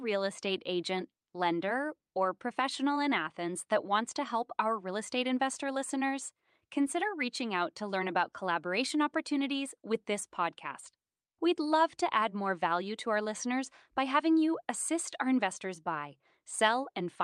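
No technical faults can be heard anywhere in this speech recording. There are no dropouts, glitches or level problems at any point in the audio.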